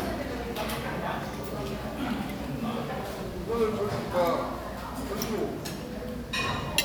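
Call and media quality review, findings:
No faults found in the audio path; the everyday-sound recording reached the listener intact, with nothing to attribute to capture, transport or playback.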